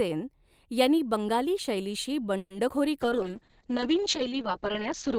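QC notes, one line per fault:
2.37–2.52 s, call audio freeze. The speech stops and the last sound is stretched into a fading buzz or hiss for about 130 ms. Packets were likely held up and the jitter buffer ran dry. When they arrived, the speech resumed where it paused, so nothing is lost.
2.68–2.71 s, short concealed packet loss. About 40 ms of speech never reached the decoder. The receiver bridged the hole by extending the preceding sound for a moment, then blended back. It comes across as a brief smear or wobble.
3.02–5.18 s, call bitrate drop. The encoder falls from 32 kbps to 7 kbps and stays there to the end. Coding turns coarse and the audio band narrows from 20 kHz to 8 kHz, so the speech sounds rough, watery and muffled.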